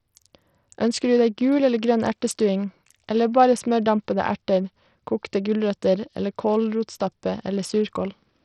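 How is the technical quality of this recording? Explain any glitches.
The quality is pretty rough. The whole clip carries heavy codec damage, with no clean stretch anywhere.

From start to finish the top end is thin and unstable, with a gritty, grainy layer on the speech. That points to likely Bluetooth SBC compression at a tight setting, which fits a bitrate of around 64 kbps. SBC splits the sound into a handful of wide sub-bands and hands out bits crudely. With so few bits available, the upper bands get starved, so the treble drops out or flickers. The remaining bands are quantised coarsely, which leaves that rasp and some aliasing riding on the speech.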